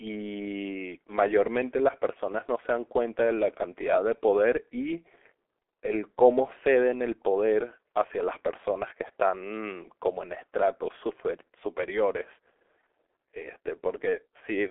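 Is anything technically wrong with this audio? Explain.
Yes, the whole clip has been through the G.723.1 codec. Nothing reaches above 3.6 kHz, and the heavy damage fits a roughly 6 kbit/s rate. Its 30 ms frames track the speech slowly, so the sound comes out muffled and hoarse, with smeared consonants.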